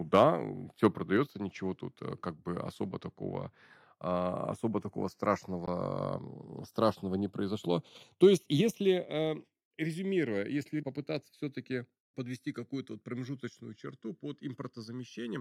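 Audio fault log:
throughout, channels drifting apart: The two channels are slowly sliding out of time with each other, consistent with two devices on separate clocks differing by around 50 parts per million. By the end the offset is under a millisecond. Summed to mono, this produces comb-filter notches that sweep gradually through the spectrum, heard as slow flanging across the whole speech clip. Unlike a fixed delay, which gives a static hollow colour, the tone keeps moving.
0.16–0.23 s, 0.84–0.86 s and 8.23–8.25 s, microphone overload: Speech peaks go about 1 to 2 dB past the converter's limit, and a small share of samples are flattened at the limit, likely because the microphone input volume was set too high. The last event comes just after "страшного не произошло". The flat-topped peaks add a harsh, crackly edge to the loudest syllables only. Codec distortion would smear across quieter passages too.
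1.17 s and 8.61 s, microphone volume stepped down: Voice and background both drop together in a single step, by about 3 dB and then about 4 dB. The first step comes just before "ничего тут э как". Each follows shortly after a distorted peak, which points to call software likely lowering the device input volume in response to clipping. The change is instant rather than a smooth fade.
5.66 s, Bluetooth dropout: Right after "такого а особо такого", the output goes silent for about 14.5 ms. This fits a single audio packet that likely failed to reach the headphones in time and was discarded. When sound resumes, the speech has moved on as if it had kept playing through the gap. A buffer underrun, by contrast, would pause and then pick up where it left off.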